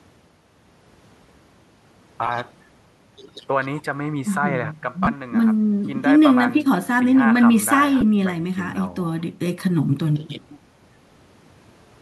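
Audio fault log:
2.27 to 8.02 s, lost LE Audio frames: brief noisy smears at 2.27–2.29, 5.04–5.07 and 8.01 s, where the decoder refilled each gap with the last spectrum under random signs.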